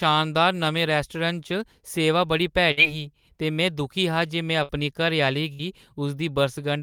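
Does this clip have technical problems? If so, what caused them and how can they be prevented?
Yes. Bursts of packet loss at 2.71–2.80 s, 4.63–4.72 s and 5.53–5.62 s: each time roughly 60 ms of speech is lost, so the last sound is stretched and faded out before the speech resumes slightly ahead. Forward error correction or a larger jitter buffer on the network link would prevent this.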